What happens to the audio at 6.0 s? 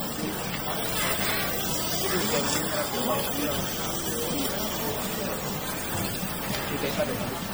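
At 6.0 s you're hearing generation loss, present for the whole clip: swirly, hollow, smeared sound with soft attacks, likely from roughly five passes through MP3, consistent with 64 kbit/s.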